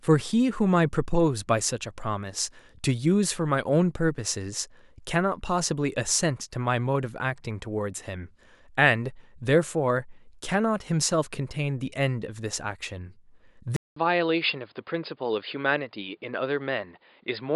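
At 13.76 s, after a 200 ms gap, the speech turns dull and slightly quieter, with nothing above 5 kHz. The input likely switched to a poorer device.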